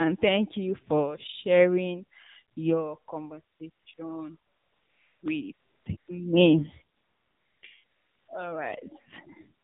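Throughout, the speech carries AMR narrowband mobile codec damage at 7.4 kbps. Nothing above 4 kHz survives, and the voice has a buzzy, synthetic edge from the pulse-driven vocal-tract model. That edge is what separates it from a plain low-pass filter, which would only sound dull.

Starting right after "you for sharing your", AMR comfort noise fills eight pauses: 3.56–3.60, 3.72–3.86, 3.94–3.98, 4.52–5.22, 5.54–5.86, 5.98–6.08, 6.96–7.62 and 7.84–8.28 s. The phone stopped sending speech frames, and the receiver substituted steady, smooth synthetic noise that switches in and out. Unlike a dropout, these gaps are never truly silent.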